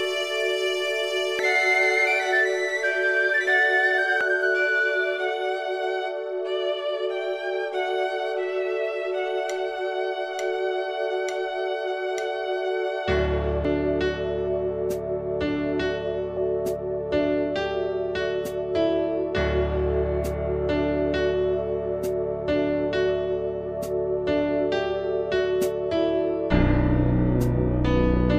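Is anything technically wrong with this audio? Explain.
Yes. Damaged data in a compressed stream appears at 1.39, 4.21 and 13.65 s, and from 16.34 to 16.37 s. Corrupted bytes make the decoder misread frames and search for the next header, producing a chirp, squawk, click or short hole.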